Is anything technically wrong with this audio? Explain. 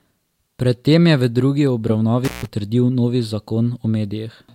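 Yes. At 2.24 to 2.45 s there is an intermittent contact: a loose plug or cable connection briefly opens, breaking the signal path for about 0.15 s. The speech drops out abruptly, with crackle where the contact breaks and remakes, and faint hiss survives the gap.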